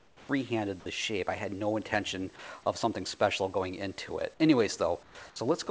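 From 0.00 to 0.29 s, and again from 5.03 to 5.15 s, the background gives way to a smoother, steadier hiss about 7 dB quieter, the sound of comfort noise in place of the background, likely from a sender that stopped transmitting during pauses while the receiver synthesised filler noise. Unlike a noise gate or dropout, these gaps aren't silent. They hold an even, featureless noise of a different level, audible within the 8 kHz band of the call.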